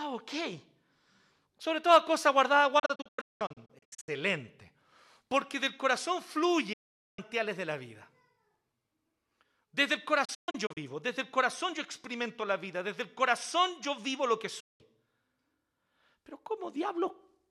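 The speech has four digital broadcast dropouts: 2.79–4.09 s after "toda cosa guardada", split into several short holes; 6.73–7.19 s between "del corazón" and "de la vida"; 10.25–10.78 s, again broken; and 14.60–14.81 s after "yo vivo lo que". The receiver muted when frames were lost or corrupt, with an 8 ms fade rather than a click. The speech is simply missing, in steps that fit roughly 32 ms frames. Nothing is smeared or filled in, which is what separates this from concealment.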